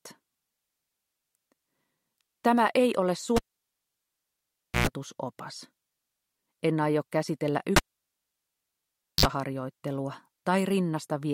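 At 3.36 s and again at 7.76 s a cable is pulled and plugged in. Each time, a pop and a vertical spectrogram line give way to near-flat silence of about 1.46 s and 1.44 s. Then a brief mains buzz (0.11 s at 60 Hz, then 0.05 s at 50 Hz) shows as stacked harmonic lines while only the plug tip touches, before a second pop as sound returns at 4.87 s and 9.26 s.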